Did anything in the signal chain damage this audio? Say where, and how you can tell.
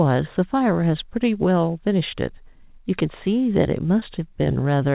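Yes: short concealed packet loss on the network path at 4.00 s, where about 20 ms went missing and was smeared over with continued sound, not left as a silent dropout.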